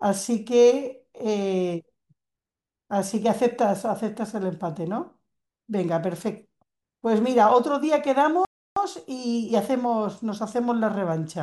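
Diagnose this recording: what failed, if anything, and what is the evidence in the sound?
The failure is a playback stall at the playback stage. The speech stops dead at 8.45 s and the output is silent until 8.76 s, a gap of about 314 ms. It breaks off in mid-flow, with no fade or trailing sound. The speech then resumes abruptly. The likely cause is the player running short of data, or its thread being blocked, so it had nothing to send out until it recovered.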